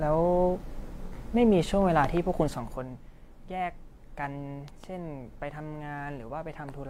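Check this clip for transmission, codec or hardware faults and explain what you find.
Two kinds of fault turn up in this speech clip: a brief codec dropout and a couple of pop pairs.

AAC frame loss with concealment shows up from 1.07 to 1.13 s. One frame, roughly 43 ms, never made it through, so the decoder patched the gap by reusing the previous spectrum. That leaves a short smeared, noisy or phasey blip.

Loud pops come in pairs, from 2.04 to 2.19 s and again from 4.68 to 4.86 s, with two sharp pops each time, peaking about 10 dB above the speech. The likely cause is a voltage spike from a switch, connector or static discharge, shaped by the downstream circuitry, while the speech carries on underneath.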